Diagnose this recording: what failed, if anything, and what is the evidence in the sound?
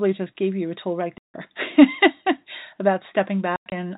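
Packet loss filled with silence occurs at 1.18 to 1.34 s, just after "you a tool right", and again at 3.56 to 3.72 s. This is a network fault. The first gap is a single 160 ms hole, consistent with a run of 20 ms packets going missing. The second spreads about 120 ms of dropouts over 160 ms, with the longest run 100 ms. The receiver inserted digital silence instead of concealment, so the 4 kHz-band G.711 speech stops abruptly.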